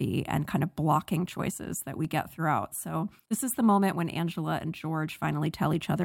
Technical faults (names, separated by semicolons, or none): CD scratch ticks